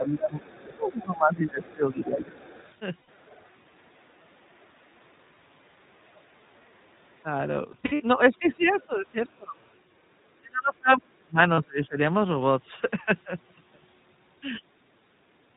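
Throughout, the sound is narrowband, with nothing above 4 kHz, and has a slightly rough, synthetic edge. That is the iLBC codec, which encodes each 20 ms frame on its own, here at 15.2 kbps, with plainly audible coding damage.

From the start to 2.37 s, the voice dips by as much as about 20 dB. This is speech suppressed in double talk, likely an echo canceller turning down both voices while the far side was also talking. The same ducking returns briefly near 3.96 s (about 15 dB), across 7.24 to 12.0 s (up to about 35 dB, roughly two seconds in total), and at 14.58 to 14.75 s (about 25 dB).

From 0.4 to 8.86 s, a faint second voice sits about 30 dB below the talker. This is the other side's voice leaking through, likely loudspeaker echo that the canceller did not fully remove.

At 3.02 s there is a 60 ms held, buzzy vowel. Scattered bursts of the same sound run from 7.72 to 8.01 s, the longest about 70 ms, and another 40 ms burst comes at 11.54 s. 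These are lost iLBC frames: the decoder repeats the last pitch cycle mixed with noise, and the voice recovers cleanly right after each gap.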